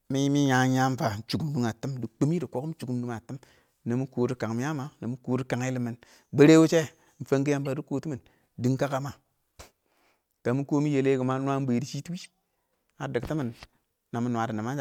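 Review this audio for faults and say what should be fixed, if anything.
Corrupt frame decoded, at 2.81 to 2.84 s, at 7.65 s, and at 12.20 to 12.26 s. Each is a short chirp or blip laid over the speech, peaking at about -30 dBFS in the first and last and a little quieter in the middle. Flipped bits in a compressed frame caused misread gains or codes, so the decoder put energy at the wrong frequencies. The length of each burst points to one damaged frame at first and a run of several by the last. Fix this by adding error detection to the transport so damaged frames are caught and concealed instead of played.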